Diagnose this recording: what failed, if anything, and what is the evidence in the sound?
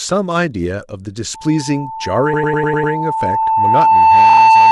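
Loudspeaker feedback squeal, in the acoustic loop: from 1.34 s an 887 Hz tone swells over a couple of seconds to about 10 dB above the speech and runs to the end.

Repeated frames, from storage or transmission: stutters at 2.33–2.93 s (100 ms blocks replayed, adding 600 ms) and 4.29–4.41 s (40 ms blocks, adding 120 ms).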